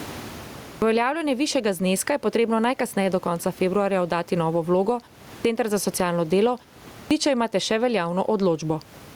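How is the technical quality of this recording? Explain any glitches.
Technically it's rough: the level keeps pumping throughout, and three phrases lose their openings after pauses. The room noise sits about 36 dB under the speech.

Gain pumping runs through the whole clip. Loud and soft parts are squashed closer in level, with a swing of around 20 dB. The likely cause is the input gain set far too high, with a fast limiter clamping down on every peak.

Clipped start after a pause happens three times. At 0.68 s, after the opening silence, about 0.14 s is swallowed right before "uveljavljanje višjega zneska je". At 5.30 s, after "februarja oddati novo vlogo" and a 0.3 s pause, about 0.15 s goes missing before "za socialno delo". At 6.95 s, just after "za socialno delo" and a 0.38 s pause, roughly 0.16 s vanishes. Each time the output device seems to have dozed off in the silence, so the speech jumps in abruptly without its first sounds.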